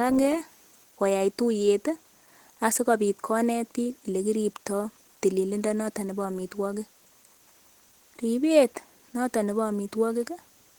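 Throughout the speech, the sound is hoarse, rough and muffled, and the damage is plainly audible. The likely cause is Opus compression in its hybrid speech mode, at a rate that fits 16 kbps. Bandwidth stays full, reaching 20.2 kHz.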